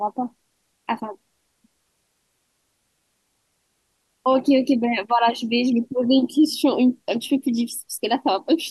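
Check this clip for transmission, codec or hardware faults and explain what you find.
I found no faults to report in the clip.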